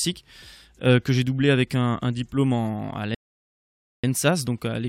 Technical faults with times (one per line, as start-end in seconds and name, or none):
3.15-4.04 rebuffering stall